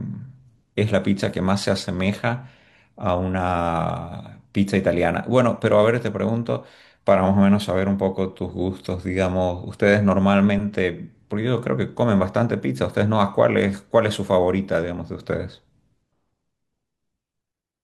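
No technical faults can be heard anywhere in the recording, and the signal carries the speech without any audible problem at any point.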